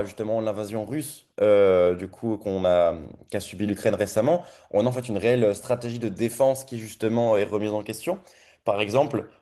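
No technical faults are audible.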